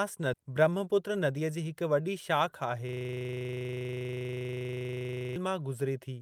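At 0.33 s a skip ahead cuts out roughly 0.7 s of speech. Audio that was already queued behind the missing stretch plays straight on, so the two sides are spliced with no silence and no fill. That distinguishes it from a dropout, where a gap or concealment noise would mark the loss. Here the delay simply shrinks by the missing amount, and the only cue is an abrupt, unnatural join in the speech.

From 0.43 to 1.65 s a jitter buffer speed-up follows, ending just before "हिक वॾी". The receiver was holding more audio than its target, so it trimmed many short pitch-period pieces in a row, about a tenth of a second in total. The speech runs at 108 % speed and sounds slightly rushed. Because whole pitch periods are removed rather than the audio being resampled, the pitch stays where it was. That separates this from a clock-rate error, which would raise pitch along with tempo.

From 2.89 to 5.36 s a system hang loop takes over. 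The machine or driver stalled while the audio hardware kept replaying the same 40 ms ring-buffer segment, 62 times in a row. The repeats cycle at 25 Hz. The repeats are identical and evenly spaced and continue for over two seconds, which rules out random packet repetition or concealment and points to a locked-up buffer.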